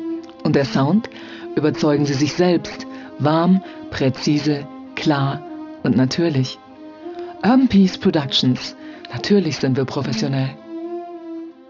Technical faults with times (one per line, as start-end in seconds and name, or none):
0.00-11.70 aliasing